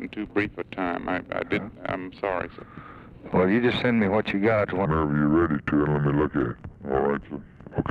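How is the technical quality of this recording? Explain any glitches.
There's one real problem, and it runs to the end. From 4.85 s to 7.91 s there's a section at the wrong speed. The audio plays at about 0.75 times its proper rate, likely from being fitted to the wrong clock, so everything drops roughly five semitones and drags, sounding deep and sluggish against what came before.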